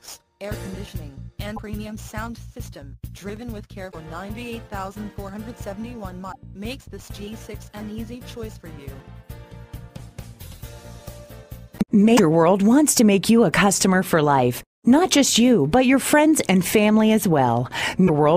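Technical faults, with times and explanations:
1.53 to 18.10 s, damaged data in a compressed stream: five brief blips at 1.53, 3.88, 6.28, 12.14 and 18.04 s, each lasting 56 to 72 ms. At each point some bytes of the encoded stream are corrupt, so the decoder misreads the affected frames and outputs garbled fragments instead of the real audio. It then loses frame sync and has to hunt for the next valid header before normal playback resumes.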